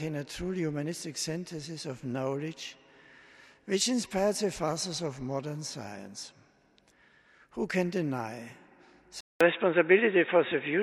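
At 9.21 s the sound drops out for 200 ms, then returns band-limited to 3.8 kHz, duller and boxier, with a level shift of a few decibels and a new noise floor some 40 dB down until 10.82 s. This is likely an input switched to a poorer device.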